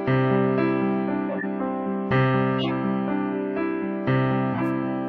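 Corrupt frame decoded at 1.29–1.44, 2.59–2.71 and 4.54–4.68 s: damaged compressed frames played anyway, giving brief chirpy noise bursts near -15 dBFS, added energy rather than a dropout's silence.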